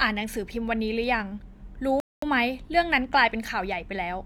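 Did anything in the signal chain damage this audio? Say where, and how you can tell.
Yes. The damage happened at playback, where the player's download buffer ran dry. The speech cuts to silence at 2.0 s and picks up again at 2.22 s, a gap of about 223 ms. That is a rebuffering stall: the player had no more downloaded audio, so it waited until more arrived. It differs from a network dropout because the speech resumes at exactly the point where it stopped. Nothing is missing, and the only change is the extra time.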